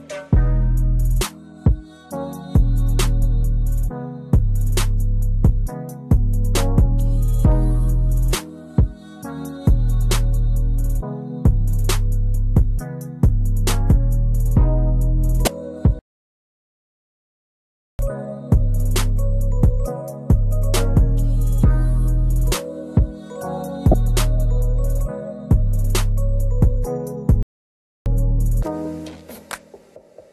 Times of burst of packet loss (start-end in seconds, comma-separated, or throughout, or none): none